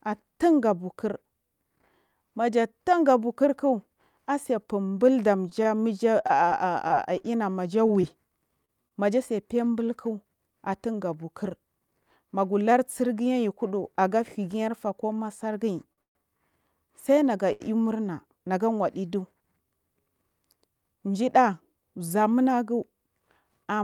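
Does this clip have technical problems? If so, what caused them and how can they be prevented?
Yes. Between 5.49 and 8.93 s, from just after "asefun blu" to "maja tse", there are scattered short gaps: around fifteen brief ticks and smears, none longer than about 30 ms. Packets were lost or late, and the receiver covered each hole by extending the preceding sound. About 180 ms of audio is actually missing. Prevention: reduce packet loss on the network path and enable forward error correction.

At 15.93 to 16.00 s, right after "koma fargiy", and again at 17.52 to 17.62 s, a short stall from a late packet holds a sound for 49 ms and 76 ms. Each time, the jitter buffer ran dry and the receiver stretched the last sound until the packet arrived, so nothing is lost. Prevention: give the jitter buffer a slightly larger minimum depth to absorb these delay spikes.

Immediately afterward, from 16.02 to 16.17 s, there is a call audio freeze. 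The sound drops to silence for about 130 ms and then resumes where it left off, with nothing skipped. The likely cause is packets held up in transit, which emptied the buffer for longer than concealment could bridge. Prevention: prioritise voice traffic with QoS to limit transit delays.

From 20.60 to 21.23 s, a jitter buffer speed-up makes the sound run at about 109% speed at unchanged pitch and feel hurried. The buffer held more audio than its target, and the receiver removed roughly 70 ms in small pitch-period slices. Prevention: steadier packet delivery keeps the buffer near its target depth.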